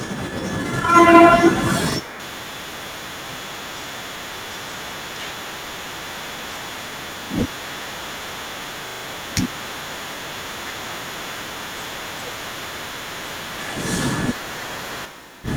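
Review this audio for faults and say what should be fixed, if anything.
Short stutters break the speech at 1.92 s and 7.24 s, where a single 40 ms slice plays twice with a hard join. At 8.88 s the same slice repeats four extra times, through 9.04 s, giving a longer stutter. This is a repeated buffer: new audio arrived late, so the device replayed its last block, which fits a 40 ms buffer. The following speech resumes in place. Keeping the output buffer fed on time, or enlarging it, would prevent these repeats.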